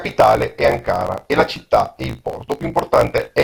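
A speech recording with a block size mismatch (truncated) throughout: each block's tail is dropped, likely from 1024-sample writes, leaving a 54.4 Hz buzz and speech running 1.16 times fast at near-normal pitch.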